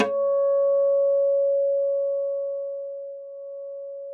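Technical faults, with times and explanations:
No technical faults can be heard in this everyday sound recording, whose signal carries no audible processing or transmission defects.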